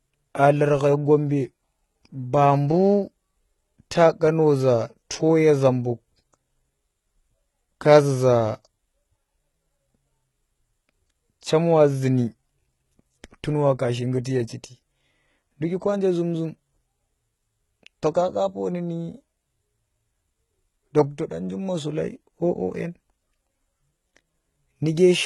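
HE-AAC compression runs throughout the speech, with heavy damage and nothing above 11.8 kHz. The treble is likely rebuilt by spectral band replication, copied up from lower bands under a coarse envelope, so s sounds turn gritty and metallic, which fits a bitrate near 16 kbps.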